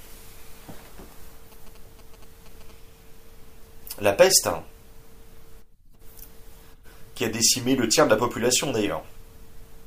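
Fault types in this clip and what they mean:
GSM signalling bursts: from about 1.52 to 2.71 s there's that galloping dit-dit-dit of short buzzes sitting well below the speech, with the buzz pitched at about 217 Hz. That's a 2G phone nearby doing its signalling chatter: it fires off short groups of radio bursts rather than a steady carrier, and something in the audio circuit rectifies that RF into the audible pulse pattern you hear.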